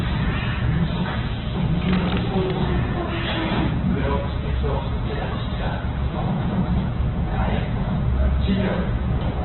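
Opus compression runs throughout this everyday-sound clip. Nothing remains above 4.1 kHz, and tones turn rough and grainy, likely from very-low-bitrate encoding filling starved bands with noise.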